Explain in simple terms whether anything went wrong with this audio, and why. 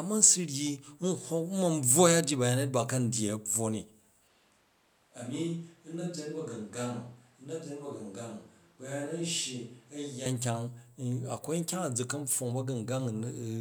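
From 4.28 to 10.26 seconds, the speech suddenly sounds hollow and roomy, thinner in the low end, a bit quieter, and with more room noise behind it. It then snaps back. This is likely a switch to a distant microphone, picking up the room along with the voice.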